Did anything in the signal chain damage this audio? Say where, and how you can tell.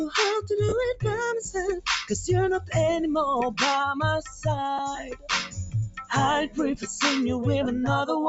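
Yes. A speech-tuned noise suppressor in the call processing is left on throughout, treating steady tones and tails as noise, so the level pumps by around 10 dB.

That same suppressor digs harder at 2.59–2.74 s, 4.21–4.46 s and 4.9–6.11 s: sustained sound sinks about 9, 9 and 14 dB while attacks survive.

Lost LE Audio frames on the Bluetooth link at 0.69–0.73 s (30 ms, fitting three frames), 4.78 s and 7.65 s: the LC3 decoder smears the last spectrum into noise.

A phantom power thump, from analogue wiring, at 6.75–6.95 s: the supply switching on a live input kicks the coupling capacitors, and the low thud decays in about 47 ms.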